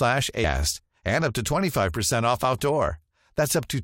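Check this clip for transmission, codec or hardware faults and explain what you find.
There's one fault, a short burst of damaged data in the compressed stream at about 0.43 s, just before "and up to". Some bytes in the encoded stream were lost or scrambled, so the decoder couldn't read that frame properly, lost its place and had to hunt for the next valid frame header to get back in sync. You hear it as a quick blip, over in a fraction of a second, early in the speech.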